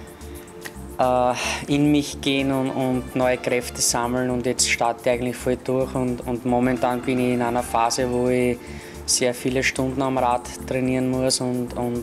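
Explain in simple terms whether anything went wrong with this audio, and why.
Nothing went wrong here: no faults show up anywhere in the recording.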